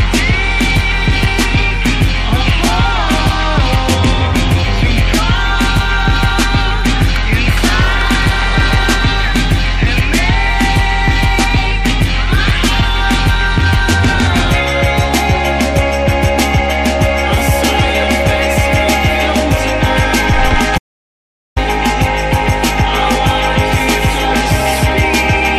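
At 20.78 s the audio drops out to silence until 21.56 s, a gap of about 0.78 s with no room tone underneath. The likely cause is a momentary loss of input, through a disconnected device, failed link or stray mute, while recording continued writing silence.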